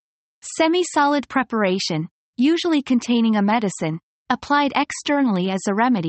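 No technical faults can be heard in this recording.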